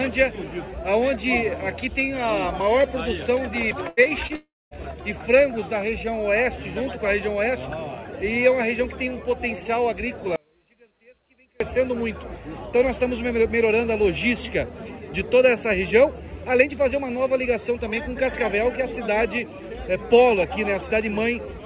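At 3.89 to 4.00 s a burst of packet loss leaves 80 ms of held, fading continuation where about 90 ms of audio is missing, seen as a smeared, decaying band on the spectrogram.

Short concealed packet loss follows at 4.03 and 4.27 s. Each gap of roughly 20 ms is filled by extrapolation, heard as a brief wobble and visible as a thin blurred slice.

From 4.36 to 4.74 s the sound decays into 240 ms of flat silence, likely a long network dropout. About 360 ms of audio is lost, and the waveform shows a near-empty stretch.

From 10.36 to 11.60 s what is likely an audio dropout to a faint residue cuts the signal abruptly. Only a trace about 35 dB down remains, a sudden collapse in the waveform envelope.

Throughout, the spectrogram shows nothing above 4 kHz, consistent with the call path's narrowband coding.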